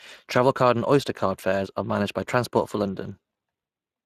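From start to finish the speech carries plainly audible Speex codec damage. This CELP coder models each frame as a filter driven by a coded excitation, and the excitation here is starved enough to leave the speech rough, hoarse and noisy. The density of this damage suggests a rate around 22 kbps. On a spectrogram, harmonics look smeared and grainy, the upper band shows diffuse noise-like fill rather than clean structure, and nothing appears above 15.3 kHz.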